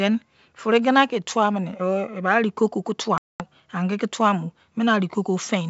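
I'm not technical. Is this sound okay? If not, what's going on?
No. This is packet loss on an ADPCM call. Around twenty chunks of data never arrived, so from 3.18 to 3.44 s, right after "arigogi kei", the speech drops into about a fifth of a second of sudden silence, and the decoder must briefly resync once sound returns.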